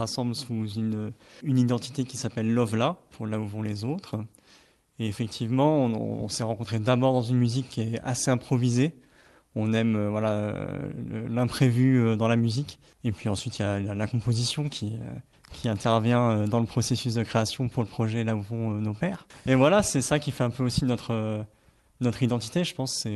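No dropouts, glitches, level jumps or other faults can be heard anywhere in the clip, and its top end stops at about 12 kHz, as expected from the call codec it was carried through.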